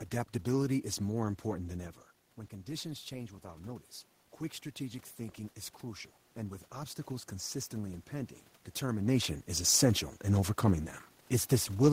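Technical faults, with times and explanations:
2.5–3.94 s, automatic gain rising: input fell about 11 dB, so gain crept up about 3 dB. Voice and room noise swell together before "quick strategic thinking is".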